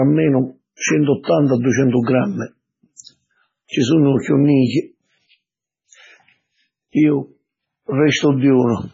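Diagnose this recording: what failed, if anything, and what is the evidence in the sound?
The codec stage failed, most likely heavy MP3 compression at a very low bitrate, consistent with about 16 kbps. Throughout the speech, nothing survives above 7.6 kHz, and starved frequency lines switching on and off leave a watery, swirling texture with smeared consonant attacks.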